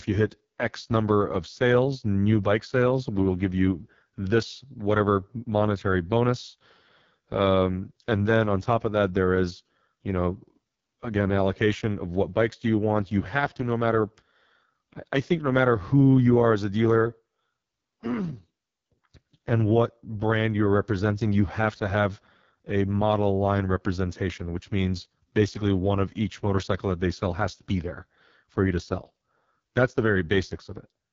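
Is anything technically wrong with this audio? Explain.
Yes. AMR wideband (HD Voice) codec damage runs throughout the clip, and it is heavy. The codec rebuilds the speech from a pulse-excited vocal tract model up to 6.4 kHz and fills the band above that with shaped noise, so nothing is present above about 7.4 kHz. The harsh, raspy roughness on every stretch fits the codec's lowest mode, around 6.6 kbit/s, where too few pulses remain to carry the voice's fine structure.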